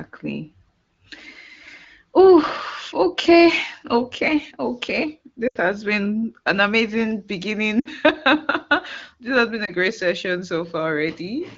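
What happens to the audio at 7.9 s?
Around 7.79 to 7.88 s there's a short run of lost AMR speech frames, about 60 ms. The decoder stretches the last good frame and fades it, so the speech drops to near silence and comes back weak or rough for a moment.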